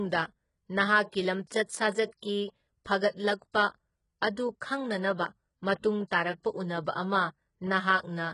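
From the start the whole speech recording carries heavy codec damage, likely from HE-AAC compression at a very low rate, around 12 kbps. The treble sounds synthetic. Spectral band replication has rebuilt it from copied lower bands, so its harmonics don't line up with those below, and sibilants come out gritty and lispy. Nothing passes above about 11.1 kHz. A plain lowpass would dull the sound, but here the top stays present and is not the original.

At 2.20 to 2.23 s a pre-echo appears: a short hiss runs for about 29 ms before an attack, which then lands softened and smeared. The transform block spread its quantisation noise, sized for the loud onset, back into the quiet moment before it. The noise comes ahead of the transient, which sets it apart from reverberation or a click that trails the attack.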